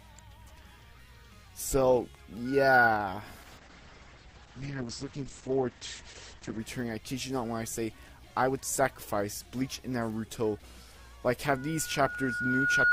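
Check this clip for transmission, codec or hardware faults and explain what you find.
Two kinds of fault are present: loudspeaker feedback squeal twice, and a call bitrate drop.

Loudspeaker feedback squeal, 2.45–2.90 s and 11.44 s to the end: a 1.4 kHz mic-speaker loop swells, over about 0.3 s and then about 1.5 s, to roughly 10 dB above the sound. Its self-building single pitch separates it from a steady hum.

Call bitrate drop, 3.42–6.65 s: the encoder falls from 128 to 9 kbps, cutting bandwidth from 20 kHz to 8 kHz. The sound turns coarse and muffled throughout, without the gaps that packet loss would leave.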